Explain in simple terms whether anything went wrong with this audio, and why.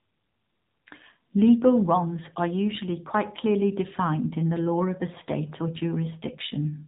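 Something did go wrong, and it lasts the whole clip: the speech has been through the AMR narrowband mobile codec, the squeeze used for older phone calls. It throws away everything above about 3.8 kHz, so the voice sounds boxed-in and dull, with no crispness on sounds like s or f. It also rebuilds the voice from a simple model of the throat and mouth, and here it's squeezed hard enough that you can plainly hear a buzzy, synthetic edge from start to finish.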